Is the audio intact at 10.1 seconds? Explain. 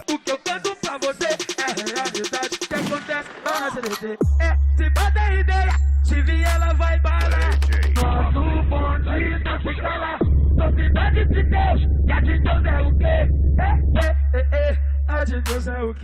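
No. At 10.1 seconds the adaptive stream at a lower bitrate is in effect: from 8.02 to 14.02 s the player switched to a much leaner encoding, consistent with Opus dropping from 64 to 8 kbit/s. The sound turns abruptly dull, with nothing above 4.2 kHz, and no gap.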